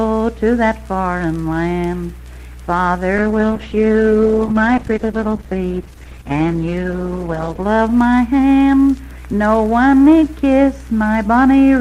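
Around 3.19 s a call bitrate drop kicks in and hangs on until about 7.73 s. The bandwidth estimate collapsed, so the encoder got squeezed down to a fraction of its usual bits and had to code everything far more coarsely, shaving off the top end too. You hear the sound go muffled and watery for roughly 4.5 s, which fits a fall from around 64 kbps to about 11 kbps before it recovers.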